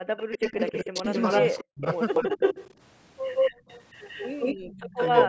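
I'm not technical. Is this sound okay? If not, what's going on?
No, there are a few problems, all typical of a call where one end used a loudspeaker and both sides talked over each other.

The voice keeps getting turned down from 0.04 to 1.06 s, 1.6 to 1.85 s, 2.23 to 2.41 s and 4.55 s to the end. The dips around 0.04 and 1.6 s are very deep, almost cutting the voice out, while the one at 2.23 s is milder. This is likely speech suppressed in double talk: with both sides speaking at once, the echo canceller couldn't tell its own talker from the loudspeaker and pulled everything down.

There's also an echo leak: a delayed second copy of the voice trails behind the original. From 0.17 to 2.74 s it lags by 263 milliseconds and is about as loud as the voice itself. From 3.35 s to the end it lags by 175 milliseconds and is a bit louder than the voice. The likely cause is a loudspeaker at one end whose echo canceller didn't scrub out everything its microphone heard, so that leftover got sent back.

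Finally, from 3.53 to 3.67 s the room's background sound briefly drops away and then returns. That's background gated by the echo canceller. While the loudspeaker was playing, the canceller clamped the microphone down hard for about 150 milliseconds, which is why the room tone vanishes for a moment.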